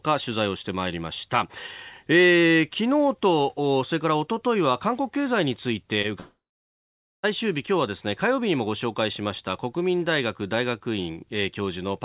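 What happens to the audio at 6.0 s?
A short concealed packet loss occurs from 6.02 to 6.06 s: about 20 ms of audio never arrived in time, so the receiver continued the preceding sound, from its pitch if voiced or as shaped noise if not, then blended back, leaving a brief smear or wobble.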